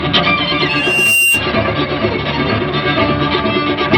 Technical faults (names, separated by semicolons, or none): loudspeaker feedback squeal